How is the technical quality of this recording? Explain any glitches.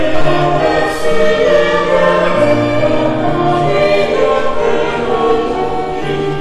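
The recording suffers from hard clipping throughout its length. The signal was driven roughly 6 dB beyond what one stage could pass, so the tallest peaks, around one or two percent of the waveform, are sliced flat. Those squared-off tops generate harmonics high in the spectrum, heard as brief crackle riding on the loudest moments. Unlike soft clipping, which rounds peaks gradually and thickens the sound, this distortion is abrupt and brittle, appearing only on the peaks.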